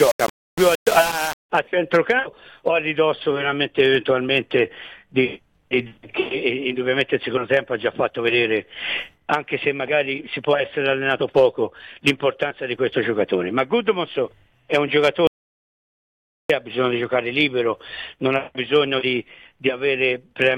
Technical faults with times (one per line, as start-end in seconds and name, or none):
0.00-1.50 low bit depth without dither
15.27-16.50 audio dropout to silence